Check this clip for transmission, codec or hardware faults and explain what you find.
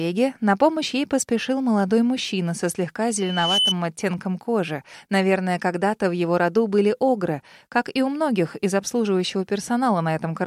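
One fault stands out, a loudspeaker feedback squeal.

Loudspeaker feedback squeal, from 3.18 to 3.75 s. A microphone picked up the loudspeaker it was feeding, and around 3 kHz the loop gain went past one, so that frequency kept reinforcing itself on each pass. It is heard as a single pure tone that swells over a little under half a second to roughly 5 dB above the surrounding sound, then stops at 3.75 s.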